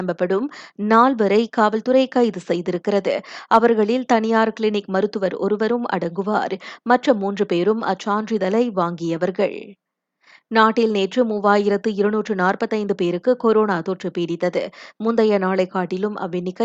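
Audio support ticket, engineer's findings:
Listened through the speech recording and found nothing wrong, so there's nothing to chase on this ticket.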